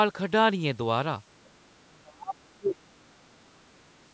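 A speech recording with two call-processing faults. From 1.44 to 1.5 s a very faint second voice, roughly 40 dB below the talker, slips in: the other side's voice leaking through, likely residual loudspeaker echo that the canceller missed. Unlike crosstalk, it is brief. From 1.78 to 3.85 s the talker's speech is suppressed in double talk, pulled down by as much as about 30 dB over roughly two seconds, likely because the echo canceller ducked both voices while they overlapped. The uneven dips set it apart from a steady level drop or a dropout.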